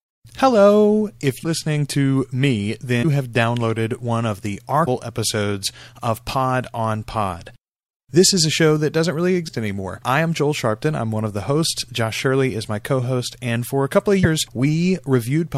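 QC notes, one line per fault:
1.43–1.46 s (just before "to me"), 3.02–3.05 s, 4.85–4.88 s (between "downloaded one of the" and "episodes of"), 9.47–9.50 s (between "show that doesn't really" and "anymore I am"), 14.23–14.26 s: broken MP3 bit reservoir. Each event is a 28–30 ms garbled break where the speech jumps ahead, about one 26.1 ms frame long. It is likely caused by missing frames, so the next frame decodes borrowed reservoir bytes taken from the wrong data.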